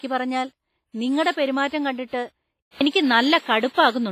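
Throughout the speech, the sound points to a low-bitrate transform codec, likely WMA compression at around 24 kbps. Coarse quantisation spreads noise across each long block and strips weak spectral detail, so the damage is heavy: the audio rings and sounds washy, with a hiss that swells and fades with the speech. The band is also cut, with nothing above 15.6 kHz, which fits an encoder discarding high frequencies to save bits.

At 1.32 to 1.37 s there is pre-echo. A sharp attack lands late in a transform block, and the quantisation noise sized for that loud onset is spread evenly back through the quieter part of the block before it. The result is a burst of hiss about 56 ms long running ahead of the attack, which itself sounds softened and smeared rather than crisp.

At 2.62 s the input switched to a poorer device, likely a change of microphone or a headset call profile mid-recording. The sound drops out for about 0.19 s at the switch. 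From then to the end the band stops at 10.5 kHz, so the speech turns duller, the level shifts by about 5 dB, and a new background noise floor sits some 40 dB below the speech.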